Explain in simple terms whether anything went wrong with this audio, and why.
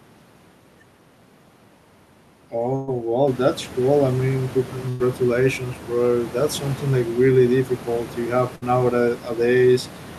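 Bursts of packet loss at 2.75 s, before "well that's cool I", at 4.89 s, after "that's cool I mean", and at 8.55 s, after "really difficult you have", each drop roughly 60 to 120 ms of speech, which is bridged with a fading buzz or hiss.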